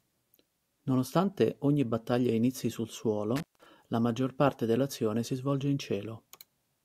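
Right after "ogni battaglia inizi sul", at about 3.36 s, there's an intermittent contact fault that runs to about 3.66 s. It sounds like a loose plug or cable briefly losing its connection: the speech drops out with a crackle at each edge, and for roughly 170 ms while the line is open you get a faint hiss. The signal comes back in time for "la maggior parte dell'azione".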